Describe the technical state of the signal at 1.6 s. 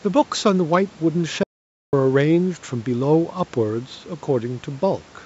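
At 1.6 s the signal is in an audio dropout to silence running from 1.43 to 1.93 s, about 0.5 s. The speech cuts off abruptly and returns mid-flow, with silence and no room noise between, likely because the input was lost while silence was still being recorded.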